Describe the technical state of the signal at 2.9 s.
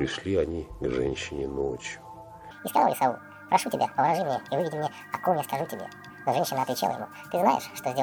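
At 2.9 s the signal is inside a section at the wrong speed, running from 2.51 s to the end of the clip. Playback runs 1.82 times too fast, so pitch rises roughly ten semitones and everything sounds high and hurried, likely from a clock or rate mismatch.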